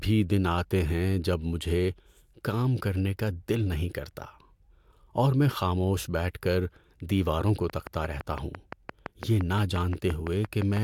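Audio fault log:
7.70–10.78 s, train of clicks: a run of about twenty sharp, near-identical pulses arrives at a steady 5.86 per second, ticking over the speech and staying audible in the gaps between phrases. Each click peaks roughly 10 dB above the surrounding signal, so the pulses stand out as a regular popping rather than blending in. The even spacing and repeated shape likely point to interference from nearby equipment or a faulty connection or power supply.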